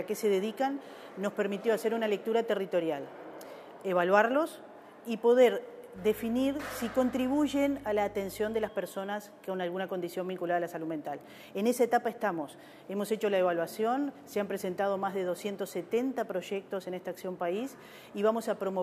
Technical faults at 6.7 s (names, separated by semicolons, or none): mains hum